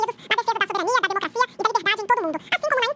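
From start to finish the audio runs at double speed and sits a full octave, 12 semitones, too high, the signature of a wrong sample rate. The samples are clocked out twice as fast as they were captured, which fits 8 kHz material played back at 16 kHz without conversion.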